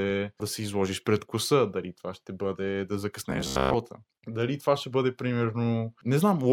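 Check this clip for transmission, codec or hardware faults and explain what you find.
One fault, lasting from 3.30 to 3.74 s, where the speech turns into a rigid, metallic drone. A buzz fixed near 67 Hz runs through it. This is robotic sound from repeated short buffers, likely caused by new audio arriving too seldom. The playback fills each gap by looping the last fragment, roughly 15 ms long, which fits that buzz frequency. Most of the real audio in that stretch is skipped.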